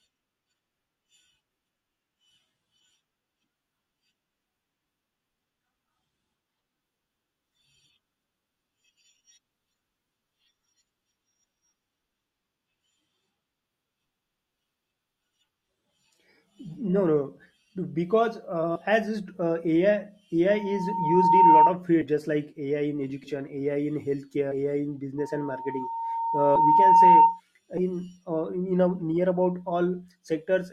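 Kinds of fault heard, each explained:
Compressed frames skipped: Whole chunks of the coded speech are never played, so the sound jumps forward. This happens at 18.75 s between "no because" and "as is uh", at 22.01 s just before "just like", and again at 23.23, 24.51, 26.55 and 27.77 s. The losses range from roughly 70 ms to nearly half a second, consistent with 20 ms frames. Unlike a dropout, there is no silent gap; the audio simply jumps ahead.
Loudspeaker feedback squeal: A microphone is picking up the loudspeaker it feeds, and the loop gain passes one at a single frequency, 918 Hz. That tone grows by itself into a squeal. It runs from 20.50 to 21.77 s, swelling over about a second, and from 25.18 to 27.40 s, building over about two seconds. Both times it peaks about 10 dB above the speech. A steady hum or test tone holds its level; this one swells and always returns at the same pitch.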